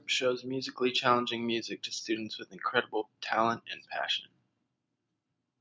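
Nothing stood out on listening to this speech, which shows the ordinary signs of call microphone processing, with the lowest bass trimmed and nothing above 8 kHz.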